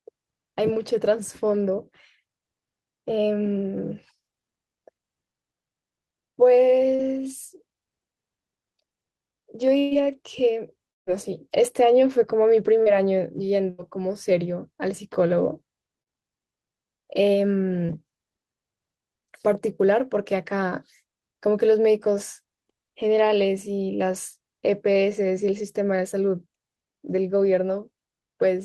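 At 6.95 s there's a short concealed packet loss: about 40 ms of the call arrived too late, so the receiver stretched the preceding sound across the hole and blended back. You get a quick smear rather than a clean cut. Then at 9.79 s comes a burst of packet loss, 120 ms gone, filled throughout by a continued, tapering version of the last sound before the speech picks up further along, minus that chunk. Just after, from 10.91 to 11.10 s, the sound trails off and drops to near-silence for roughly 150 ms before returning with a piece missing, most likely a long network dropout. The same short concealed packet loss smear recurs at 12.83, 16.02 and 17.86 s, each around 40 ms lost and patched over. Between those, at 13.70 s, there's a second, shorter burst of packet loss, 80 ms bridged by the same fading continuation.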